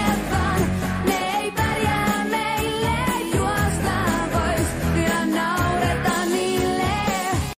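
No technical faults can be heard anywhere in this audio. Nothing in the sound calls for a timestamp or an explanation.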